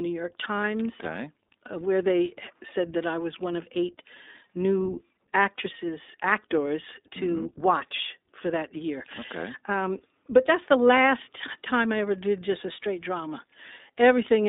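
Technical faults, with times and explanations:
Throughout, iLBC codec: the speech is confined to roughly 250 Hz to 3.7 kHz and has a plainly rough, synthetic grain. Each short frame is coded on its own, which fits iLBC's 20 ms mode at about 15.2 kbps.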